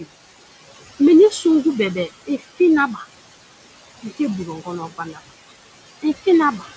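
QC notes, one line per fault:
Throughout: noise suppressor artifacts. The suppressor pulls down the bands it treats as steady noise by about 18 dB, frame by frame, so the room noise, which sits about 13 dB under the speech, drops away in pauses and swells back under each phrase. On a spectrogram the noise floor shows as a patchy, pumping haze that empties between phrases, with isolated speckles of leftover noise. Everything stops at 8 kHz, which fits a G.722 call path.
2.26–2.59 s, 2.94–3.03 s, 4.46–5.29 s, 6.58–6.69 s: speech cut by the noise suppressor. In these stretches the suppressor mistook quiet parts of the speech for noise and turned them down with the background. The drop is about 16 dB in the first, about 8 dB in the second, about 19 dB in the third (the longest, with roughly a third of a second affected) and about 11 dB in the last. Soft consonants and word tails there sound swallowed or faint. 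The waveform shows envelopes that dip, and the spectrogram shows low-energy detail, especially faint high-frequency consonant energy, blanked out along with the surrounding noise.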